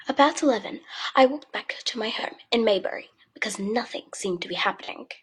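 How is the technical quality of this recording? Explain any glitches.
Two brief glitches interrupt the speech, both from AAC frame loss with concealment. At 2.18 to 2.25 s and again at 4.83 to 4.89 s, a short patch of about 43 ms turns smeared and noisy, as if the sound blurs for an instant. Each gap fits a single lost AAC frame. The decoder papered over it by reusing the last good spectrum with scrambled phase, so the audio never drops out but briefly loses definition.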